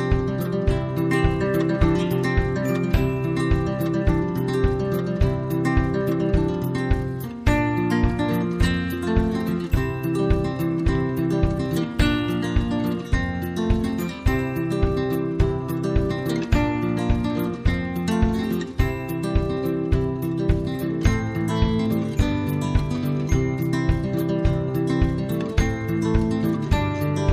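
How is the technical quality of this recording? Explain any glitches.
The technical quality of the recording is sound, with no glitches to explain.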